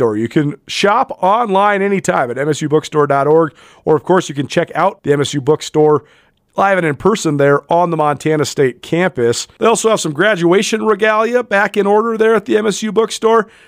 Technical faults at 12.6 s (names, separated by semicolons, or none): none